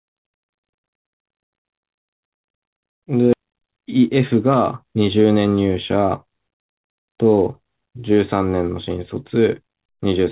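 At 3.33 s the speech skips ahead. Roughly a third of a second was dropped in transit or by the jitter buffer, and the two sides join abruptly with no gap.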